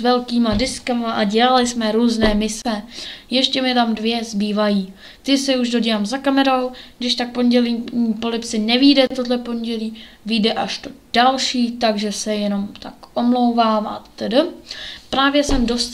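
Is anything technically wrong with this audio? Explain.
Yes. Gaps at joins of encoded pieces appear at 2.62 to 2.65 s (29 ms) and 9.07 to 9.10 s (34 ms). Untrimmed encoder delay and last-frame padding leave short, smeared silences. Unlike dropouts, the sound resumes exactly where it stopped, with nothing skipped.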